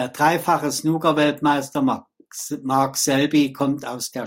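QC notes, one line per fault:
1.11–4.26 s, periodic clock jitter: from 1.11 s to the end, the speech takes on a rough, metallic edge. Interference is wobbling the converter's sampling clock at around 100 Hz, so every component of the speech gains sidebands about 100 Hz above and below it, strongest on the higher, brighter parts. Unlike mains hum, there is no steady tone: the roughness exists only while speech is present and vanishes in silence.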